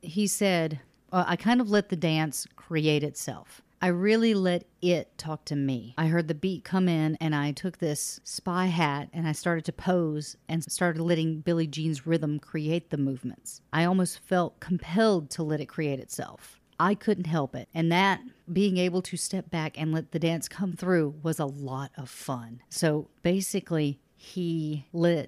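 No technical faults can be heard anywhere in the speech. Nothing in the recording calls for comment from a technical point of view.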